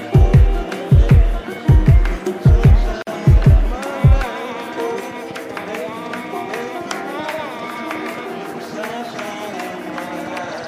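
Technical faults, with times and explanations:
3.02–3.07 s, gap at a join of encoded pieces: a 47 ms silence cuts into continuous sound. The encoder's start-up delay and last-frame padding were left in where two pieces meet. A waveform shows a flat stretch with smeared edges, and a spectrogram shows a blank vertical band.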